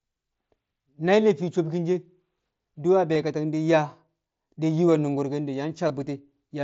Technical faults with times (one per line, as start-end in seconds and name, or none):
3.14 concealed Bluetooth headset packet loss
5.88 concealed Bluetooth headset packet loss